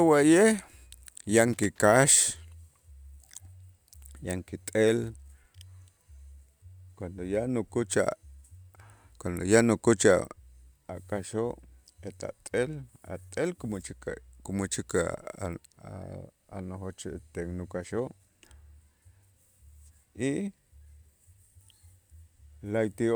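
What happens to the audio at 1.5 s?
A worn or dirty contact is making and breaking as the connector shifts, from 1.53 to 1.82 s. The speech is chopped on and off, so loose connector crackle comes through as an irregular scratchy burst.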